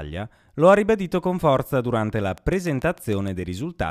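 From 2.38 s to 3.29 s, just after "con forza durante la", a train of clicks runs at a regular 6.7 per second, about seven in all, peaking about 5 dB above the speech. The similar, evenly spaced ticks likely come from electrical interference or a faulty connection or power supply.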